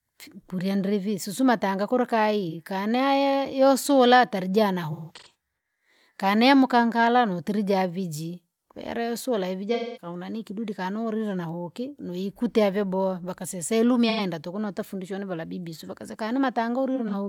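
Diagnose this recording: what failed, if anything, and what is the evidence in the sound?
The codec stage failed: AAC frames were dropped and the decoder concealed the gaps by reusing the last good spectrum. This AAC frame loss with concealment is heard as a brief smeared, phasey patch at 2.48 s (about 43 ms). Broken stretches follow at 4.92–5.34 s (about 300 ms, longest run around 150 ms) and 9.74–10.06 s (about 210 ms), then 14.09–14.20 s and 16.95–17.14 s (about 85 ms each). Longer runs decay toward silence before the speech fades back in.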